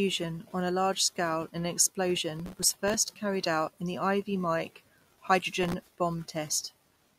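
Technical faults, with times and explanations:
2.40 to 2.94 s and 5.63 to 5.93 s, processor overload crackle: the processor keeps missing deadlines on tiny buffers of a millisecond or two, a few dozen in a row, replaying stale audio with hard edges, so gritty crackle rides over the sound, the first burst ending just before "carried out in the".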